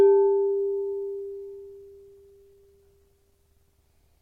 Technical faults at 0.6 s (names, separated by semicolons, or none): none